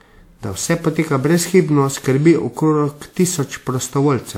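From start to finish the speech carries generation loss: a swirly, hollow smear, consonant attacks blurred and softened, more degraded than a single 128 kbit/s pass would leave. The likely cause is repeated lossy re-encoding, the sound fitting a WMA-style codec run through roughly ten times, each pass requantising on a shifted frame grid. On a spectrogram, spectral holes and speckled noise pile up below a cut-off near 20 kHz, and waveform transients look rounded.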